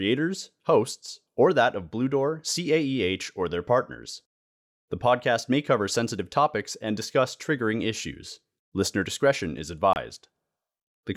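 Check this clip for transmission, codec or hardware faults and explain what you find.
One fault is audible. Just after "discretion is", from 9.93 to 9.96 s, the speech drops to silence for about 27 ms, then picks up as though it had played on. This is likely a Bluetooth dropout: a gap that fits about two packets reaching the headphones too late and being discarded, muting output until good data arrived.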